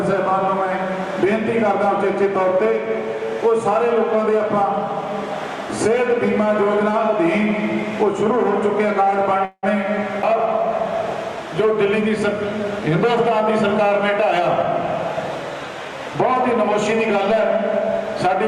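At 9.45 s the sound stops progressing for about 0.2 s, a call audio freeze. The likely cause is packets held up in transit, draining the jitter buffer. About 179 ms is filled with a fading continuation of the last sound, with 50 ms near silence, and nothing lost. A spectrogram shows smeared, decaying bands then a brief dark strip.

From 15.64 to 18.27 s a jitter buffer speed-up runs the audio about 2% fast at unchanged pitch. The receiver trimmed pitch-period-sized slices repeatedly to shed around 70 ms of excess delay. This stays below the speed where it would sound hurried, and the waveform shows tiny splices with no gaps.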